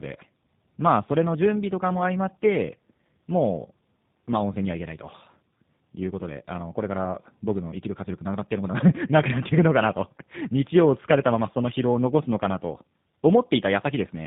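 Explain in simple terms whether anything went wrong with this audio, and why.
Something did go wrong, and it lasts the whole way through. It's tandem speech coding. The call passed through two different speech-squeezing systems, first the one mobile phones use and then another common on phone networks, and each one re-squeezed audio the previous one had already roughened. So the speech sounds rough, muffled and warbly, with nothing above about 3.7 kHz, which is why it lacks crispness.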